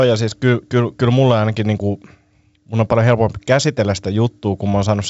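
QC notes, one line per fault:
Nothing to flag here, just speech carried over G.722 wideband telephone coding, with nothing above 7.7 kHz, as you'd expect from that codec's band limit.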